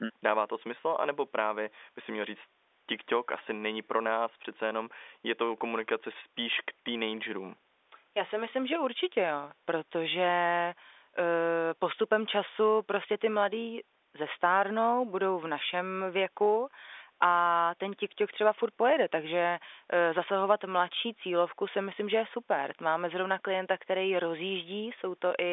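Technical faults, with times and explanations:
Nothing here counts as a technical fault: the speech just has the narrow, boxy sound of an ordinary phone line, with nothing above about 3.8 kHz after the call's microphone processing and G.711 A-law telephone coding, which is simply how that route is meant to sound.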